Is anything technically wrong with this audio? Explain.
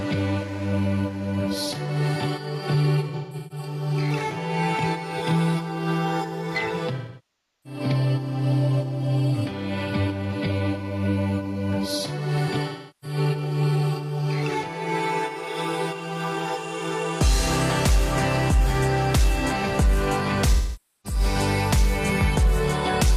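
Yes. There is AAC frame loss with concealment at four points: 3.08–3.66 s, 6.96–7.80 s, 12.68–13.18 s and 20.54–21.20 s. About 340 ms, 680 ms, 340 ms and 510 ms of audio are missing, which fits whole lost frames of roughly 43 ms each. The first loss is scattered across about 430 ms, with a longest gap of around 150 ms. The decoder fills each gap from the last good spectrum, so the sound turns smeared and noisy.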